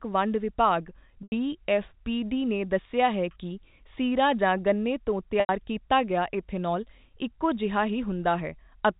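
A buzzy, held tone fading briefly to silence interrupts the speech at 1.23 s after "ਵੰਡ ਵਿਭਾਗ" and at 5.40 s after "ਗੰਨੇ ਤੋਂ", over the band-limited telephone sound. This is packet loss with pitch repetition: about 90 ms went missing each time, consistent with three lost packets, and the receiver looped the last pitch period before fading out.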